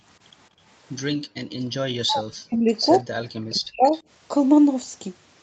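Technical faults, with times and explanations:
0.50–0.61 s and 1.16–1.63 s, background gated by the echo canceller: the room sound behind the speech is pulled down twice while far-end audio plays through the loudspeaker. The first dip is brief and shallow, about 9 dB. The second lasts a little under half a second and is much deeper, about 40 dB, so the ambience nearly vanishes before returning. On a spectrogram, the faint noise floor up to the 8 kHz call-band ceiling shows two dark gaps. The second gap is nearly black. In the waveform, the low-level background flattens toward silence and then recovers.
1.91–2.74 s and 3.47–3.93 s, speech suppressed in double talk: the talker's own voice sinks by around 40 dB in two stretches, the first about three quarters of a second long and the second under half a second. The likely cause is that the far end was talking at the same moment, and the echo canceller treated the near voice as echo and attenuated it with the loudspeaker signal. 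A spectrogram shows the harmonics and upper formants fading or breaking into patches. The waveform envelope collapses abruptly in both stretches.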